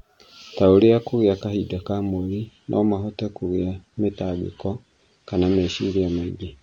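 At 2.46 s the speech abruptly loses its treble and nothing survives above 9.6 kHz, with coding artefacts rising from there to the end of the clip. This is an adaptive stream at a lower bitrate. The player switched mid-stream to a cheaper encoding, which sounds like a drop from roughly 96 to 32 kbit/s AAC. It differs from packet loss because there is no gap or glitch, only a seamless step down in quality that lasts.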